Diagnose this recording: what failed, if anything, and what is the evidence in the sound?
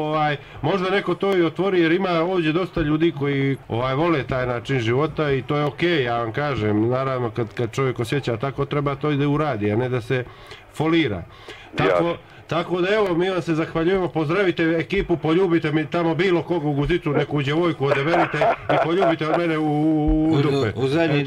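Dropped samples, likely in the driver or buffer: sharp clicks at 1.33, 5.67 and 13.07 s, where a sliver of waveform vanishes and the signal jumps.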